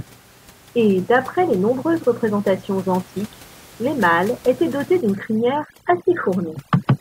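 From 5.01 s to the end, overdone noise removal sets in: bands near the estimated noise floor are pulled down hard, turning the room noise (about 26 dB below the speech) into near silence with twinkling specks. A spectrogram shows scattered isolated dots and gaps.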